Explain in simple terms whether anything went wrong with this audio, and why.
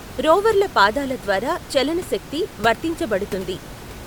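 Nothing went wrong with the recording; the speech comes through steadily, and the faint background noise of the room sits well underneath it as a natural part of where the microphone was.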